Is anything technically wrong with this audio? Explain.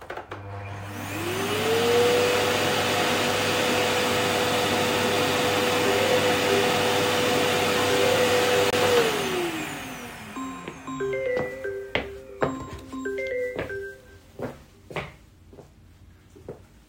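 Yes. From 8.70 to 8.73 s the audio drops to about 25 ms of silence before carrying on. This is likely a Bluetooth stall: interference delayed packets, so the headphones' buffer emptied and playback paused briefly until the resent data arrived.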